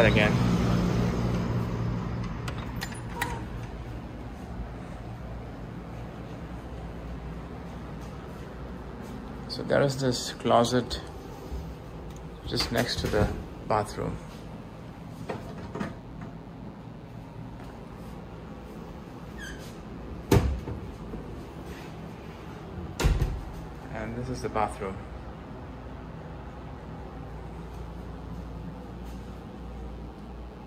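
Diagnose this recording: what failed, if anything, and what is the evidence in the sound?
Mains buzz in the analogue wiring: a raspy buzz runs throughout, well below the signal, built on 60 Hz harmonics from switching spikes leaking in through a dimmer, rectifier or broken shield.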